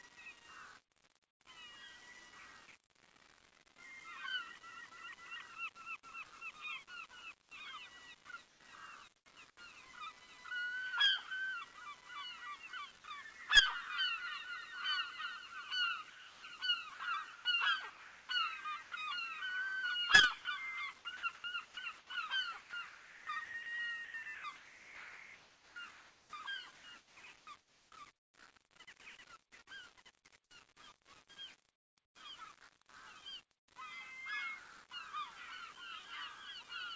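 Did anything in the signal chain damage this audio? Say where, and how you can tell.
Yes. At the sample-format conversion stage, the whole clip is grainy. The grit tracks the sound and thickens as it gets quieter. The error sits only about 20 dB below the signal. This is likely low bit depth without dither: 8-bit rounding with no noise to decorrelate it.

In call processing, comfort noise replaces the background at 1.31 to 1.40 s, 31.76 to 32.15 s and 33.59 to 33.68 s. The real ambience turns flat and featureless, dropping about 12 dB at the first gap and about 25 dB at the last. Likely cause: discontinuous transmission.

Sound chopped by the voice detector is heard at 7.43 to 9.56 s, 16.10 to 18.92 s and 20.42 to 28.34 s. The sound keeps cutting in and out. The sender's detector likely toggled transmission repeatedly, and the receiver filled each gap with noise.

Sound dropped by the voice detector occurs at 13.01 to 13.04 s. 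A 30 ms piece of sound vanishes into steady noise, then returns. The detector likely judged that quiet fragment to be background and stopped sending. This happens over the G.722 call path, which carries nothing above 8 kHz.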